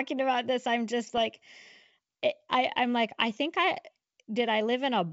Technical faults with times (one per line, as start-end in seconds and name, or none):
1.14-1.21 bit errors on an ADPCM link